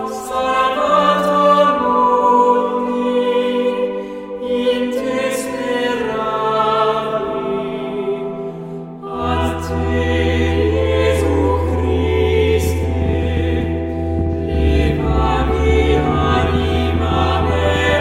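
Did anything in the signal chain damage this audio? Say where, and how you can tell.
Yes: a train of clicks from 12.64 to 17.94 s, around seventy irregular pops at 12.3 per second, peaking about 10 dB above the sound, likely interference in analogue wiring.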